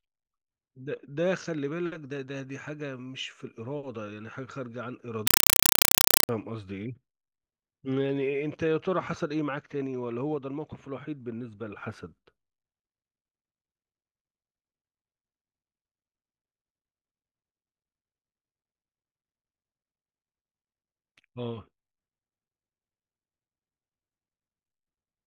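From 5.27 to 6.29 s, a compressed stream is played as audio. Loud static: 4 ms noise bursts at 31.25 Hz, fitting undecoded AC-3.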